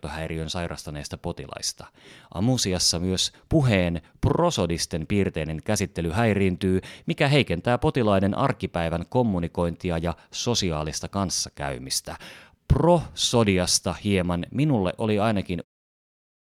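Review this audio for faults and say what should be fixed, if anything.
No faults turn up in this speech audio, so nothing needs to be fixed; the smooth fade-out ending at 15.65 s is a normal edit.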